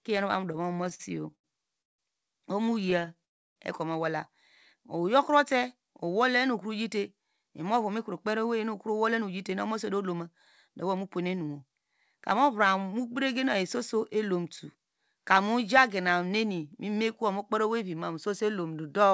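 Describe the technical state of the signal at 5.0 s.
At 5.0 s the speech is slightly stretched: from 4.77 to 5.54 s it runs at about 94% of normal speed with unchanged pitch, sounds drawn out, and may carry a faint warble. This is a jitter buffer slow-down. The receiver's buffer was low or had raised its target delay, so it repeated single pitch periods and fragments of pauses to build a reserve, adding about 55 ms. The call codec also cuts off everything above 8 kHz.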